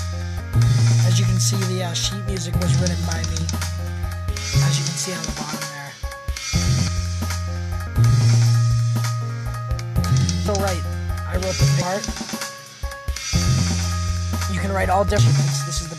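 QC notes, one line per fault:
0.39, 6.87, 7.87, 10.48, 11.81, 15.18 s, compressed frames skipped: the sound jumps ahead by about a third of a second each time (nearer 0.4 s at 10.48 s), whole 26.1 ms frames missing. Overlapping neighbours smear each join into a brief blip. On a spectrogram this shows as an abrupt content discontinuity with a faint vertical smudge, not a sharp click line.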